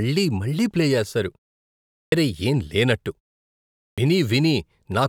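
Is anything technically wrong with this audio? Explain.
Yes. The output device is dropping into a low-power state during silences and needs a moment to wake before it passes sound again, giving a clipped start after a pause. After a pause of 0.67 s, speech at 1.97 s loses its first 151 ms, and after a 0.72 s pause, speech at 3.84 s loses about 136 ms. Each time the speech bursts in abruptly, its opening sounds missing.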